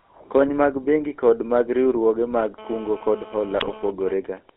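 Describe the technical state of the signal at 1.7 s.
At 1.7 s the speech carries GSM full-rate codec damage, present throughout: pulse-driven vocal-tract coding, band-limited to 250 Hz to 3.5 kHz, gives a buzzy, gravelly roughness, not mere telephone muffling.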